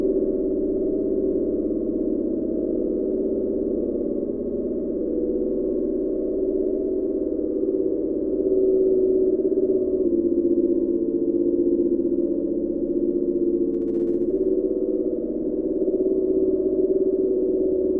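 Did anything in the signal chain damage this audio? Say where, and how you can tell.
Yes. A wrong sample rate fault runs from 10.05 to 14.3 s, at the playback stage. Through that stretch the sound slows to about 0.92 of its proper speed and drops about 1.5 semitones, and both shift together by the same ratio. That locked pairing shows the samples were clocked out slower than they were captured, with no rate conversion. The ratio fits audio recorded at 24 kHz being played at 22 kHz.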